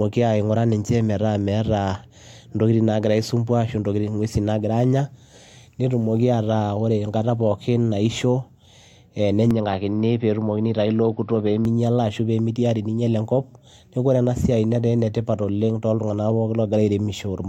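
Speech recording in which the sound abruptly turns dull and narrower between 9.51 and 11.65 s, losing everything above 5.6 kHz and picking up a faint new background hiss, with no gap at either transition and no obvious jump in loudness. The band limit and the change in noise floor point to the input likely being switched to a poorer device, such as another microphone or a headset's call profile, before returning to the original source.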